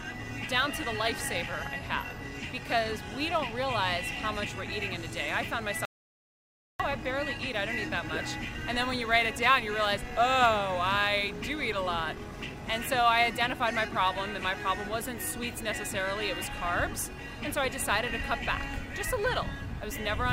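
An audio dropout to silence runs from 5.85 to 6.80 s: the sound cuts off mid-flow and roughly 0.94 s passes in silence, with no room tone, before it resumes. The input was likely lost briefly while silence kept being written.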